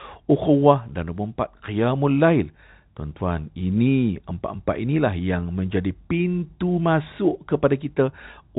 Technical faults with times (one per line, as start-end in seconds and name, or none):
none